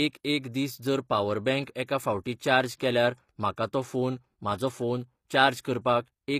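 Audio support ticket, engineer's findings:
Speech clip. Throughout: gritty, metallic sibilants and a synthetic-sounding top end. Likely HE-AAC compression, consistent with roughly 24 kbps. Spectral band replication rebuilds the treble from lower bands, so the harmonics above the crossover are misaligned.

Pre-echo: a brief hiss ahead of the attacks, which sound softened. It occurs at 1.65 s after "दीस जर पावर", at 3.56 s after "फावटी चार्ज केल्यार", and at 5.63–5.65 s after "तो फोन म्हाजो फोन". The cause is the transform codec spreading block quantisation noise into the quiet moments before each onset, over roughly 17–20 ms.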